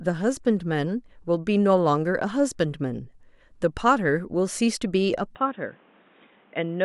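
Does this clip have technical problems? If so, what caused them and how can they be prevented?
Yes. From 5.35 s to the end, the speech abruptly loses everything above 3.8 kHz, drops about 5 dB, and gains a new noise floor, with no gap at the change; the likely cause is an input switched to a poorer device. Lock the recording input to one microphone and disable automatic device or headset-profile switching.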